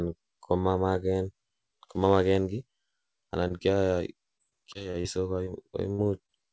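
At 3.48 to 3.52 s, 5.44 to 5.48 s and 6.26 to 6.30 s there is short concealed packet loss. Each time about 20 ms of the stream arrived too late, and the receiver bridged it by extending the preceding sound before blending back. Each is heard as a brief smear or wobble.

From 4.38 to 5.06 s, repeated packet loss produces robotic sound. Seven gaps, the longest 31 ms, are each patched in turn, so roughly a fifth of this stretch is synthesised continuation. The sound turns choppy, with fragments missing. Throughout, the band stops at 8 kHz, which fits a wideband call codec.

From 5.92 to 6.00 s, a burst of packet loss leaves a 60 ms hole. Concealment stretches the last sound and fades it, giving a held buzz or dying hiss before the audio resumes with that section absent.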